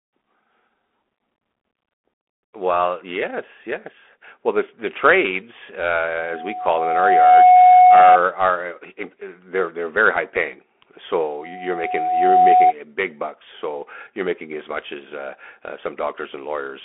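Speech heard through a Bluetooth CVSD headset codec, whose one-bit slope tracking at 64 kbps leaves a narrow telephone band, nothing above 3.8 kHz, with gritty sibilants and granular hiss throughout. Loudspeaker feedback squeal appears at 732 Hz from 6.15 to 8.20 s and again from 11.37 to 12.73 s, swelling over about a second to roughly 15 dB and then about 10 dB above the speech.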